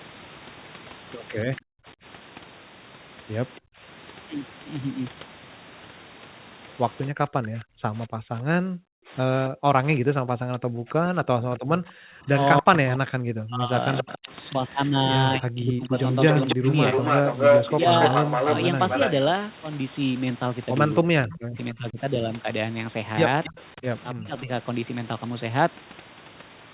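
From 1.45 to 3.82 s the speech repeatedly dips and cuts out, for under a second in total and by roughly 40 dB at its deepest. This is speech suppressed in double talk, likely an echo canceller ducking the talker while the far side also spoke. On a waveform the envelope shows sudden notches; on a spectrogram the bands thin or go blank across all frequencies. The same ducking returns from 7.11 to 16.67 s, about five seconds in all, and from 21.02 to 24.5 s, about a second. Overlapping these, from 10.89 to 24.41 s, an echo leak adds a second copy of the speech trailing 280 ms behind, about as loud as the original. It likely comes from a loudspeaker echo that was not fully cancelled. The spectrogram shows each syllable's harmonics repeated as a shifted ghost below the 4 kHz band limit.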